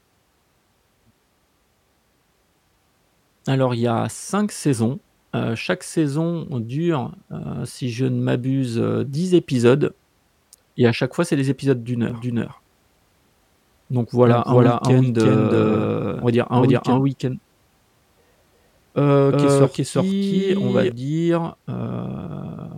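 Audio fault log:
12.10 to 20.92 s, doubled audio track: from 12.10 s the speech is joined by a second full-band copy trailing by roughly 0.4 s and at about the same loudness, so every syllable is heard again as a flat, dry repeat with no decay or room tone. It begins and ends abruptly. The cause is likely a second capture path or an edit leaving two copies out of step. On a waveform or spectrogram each burst appears twice, evenly offset, with matching shape and brightness.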